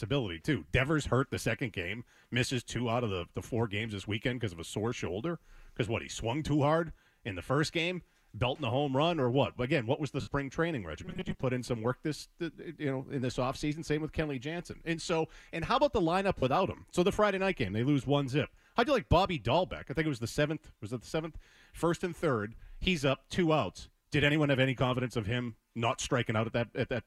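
At 10.20 s the sound turns briefly into a hissy, smeared wash and sags for about 68 ms, until 10.28 s. These are lost LE Audio frames. The decoder filled the gap by replaying the last spectrum with scrambled phase and fading it.

From 11.05 to 11.42 s the sound hardens into a rigid metallic buzz near 188 Hz. This is robotic sound from repeated short buffers, likely from audio arriving too slowly: a roughly 5 ms chunk loops while most of the real signal is skipped.

At 16.39 s a shorter patch of the same noisy smear lasts about 38 ms, ending at 16.43 s. This is another run of lost LE Audio frames, concealed in the same way.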